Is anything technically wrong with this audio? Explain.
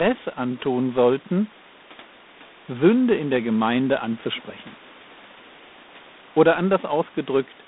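Yes. Throughout, the speech carries G.726 ADPCM coding at 24 kbit/s: each sample stores only a few bits of error from an adaptive prediction, producing a plainly audible rasping hiss that rises and falls with the speech. A spectrogram shows a line band of about 200 Hz to 3.7 kHz, with nothing above 3.9 kHz, and noise smeared between harmonics wherever speech is loud. The room noise, about 26 dB below the speech, is part of the recording.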